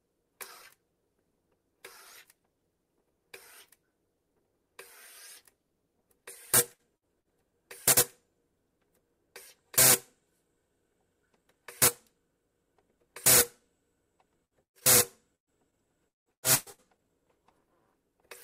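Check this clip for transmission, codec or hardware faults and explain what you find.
Yes, the audio carries network-related faults: five bursts of packet loss, one short stall from a late packet, and a stretch of repeated packet loss.

Burst of packet loss at 6.73, 6.97, 7.20, 14.45 and 14.63 s, each about 80 to 140 ms long. When a run of packets was lost, the receiver extended the last sound while fading it. About 60 ms of audio is missing each time, and about 120 ms at 14.63 s, where the fill dies away to silence for about 110 ms. On a spectrogram each burst shows as a smeared, fading patch. The 14.63 s event shows as a blank vertical band, and the waveform jumps ahead when the sound resumes.

Short stall from a late packet at 14.80 s. A packet arrived late, the jitter buffer ran dry, and the receiver held the last sound for about 15 ms before continuing. Nothing is lost, but the timing stretches slightly, giving a brief held tone or small dip. 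On a spectrogram this appears as a sliver of frozen spectrum, and on the waveform as a tiny repeated segment.

Repeated packet loss (robotic sound) from 15.35 to 17.01 s. Seven gaps, the longest about 175 ms, were each patched with continued sound, covering about 36% of the span and dropping about 0.6 s in total. The result is choppy, with pieces missing. On a spectrogram it looks like a comb of frozen or fading blocks, and the waveform shows a stuttering envelope.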